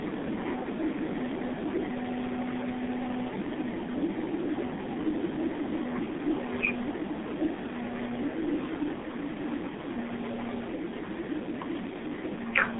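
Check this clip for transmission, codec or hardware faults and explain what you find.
Two faults stand out in this speech clip: heavy low-bitrate codec damage throughout, and a brief echo near the end.

G.723.1 codec, throughout: the speech has passed through this early internet-telephony codec at 6.3 kbit/s. It encodes 30 ms frames with a slowly updated voice model, so fast articulation gets smeared. The result is muffled, hoarse speech with blurred consonants. The line carries roughly 150 Hz to 3.6 kHz. On a spectrogram, energy stops abruptly at 3.6 kHz, and harmonics look smeared in blocky time steps.

Echo leak, 11.89 to 12.1 s: a faint, delayed copy of the speech appears, lagging by about 342 ms and sitting well below the direct voice. The likely cause is a far end on loudspeaker whose echo canceller let some of its microphone pickup through and sent it back. It sounds like a ghost trailing the speech. 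On a spectrogram, a weak duplicate of the recent harmonic pattern appears, shifted 342 ms later. In the waveform, a small extra envelope hump shows there.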